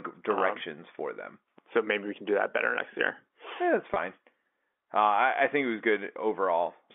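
At 3.94 to 3.96 s the speech has a brief packet loss with pitch repetition. About 20 ms of audio went missing, a gap consistent with one lost packet, and the receiver filled it by repeating the last pitch period rather than leaving silence. Because the gap is so short, the concealment never fades fully. It is heard as a momentary held, slightly buzzy tone before normal speech resumes, all within the narrow telephone band of the G.711 coding.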